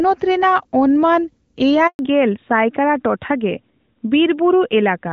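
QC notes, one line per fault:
1.87–1.99 s, handover gap: the sound cuts out for about 120 ms, fading away in a few tens of milliseconds and then sitting in dead silence until the audio picks back up. That's the call being passed from one network to another, with nothing getting through while the switch happens. Whatever was said in that stretch is simply gone, and no amount of processing will bring it back.
1.99 s to the end, fallback to narrowband: right after the gap the top end vanishes. Nothing above 4 kHz survives, so the speech goes noticeably duller and a bit rougher than the first couple of seconds, where the clean HD Voice band came through with only light codec damage. The call has dropped from the wideband codec to the older narrowband one, and the sound fits something like AMR-NB at around 12.2 kbit/s taking over from AMR-WB at 12.65 kbit/s.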